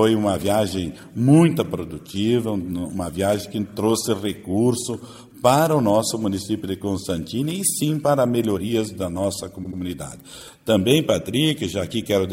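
At 9.63 s, a short run of compressed frames was written or sent more than once, so the decoder plays the same 78.4 ms block three times in a row. That block length fits a run of about three frames. The sound stutters until about 9.78 s. The two extra plays add 156.7 ms to the clip's length.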